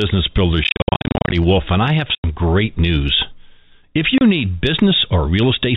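Speech carried over a G.711 telephone path, band-limited to 4 kHz, is broken up by packet loss filled with silence. Dense, scattered dropouts run from 0.64 to 1.32 s. A 90 ms hole at 2.15 to 2.24 s falls between "and I have" and "great news", and a 30 ms gap sits at 4.18 to 4.21 s. The holes step in 10 ms units, which fits 10 ms packets. Each cut to silence is abrupt, with hard edges.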